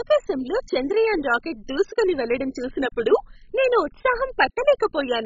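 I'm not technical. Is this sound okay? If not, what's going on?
No. Throughout the speech it sounds dull and gurgly, with nothing above about 7.4 kHz, likely from heavy MP2 compression starving the upper bands of bits.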